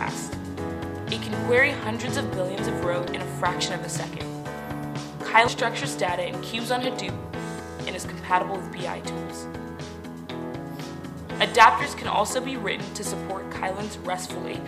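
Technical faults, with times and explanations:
3.08 s, 5.48 s and 7.6 s, dropped buffer (overrun): At each point the sound jumps forward. There is no gap of silence. The two sides are simply butted together. Roughly a tenth of a second goes missing at 3.08 s and 5.48 s, and a few hundredths at 7.6 s. The likely cause is a recording program that fell behind, so the hardware overwrote a block of samples before it was collected.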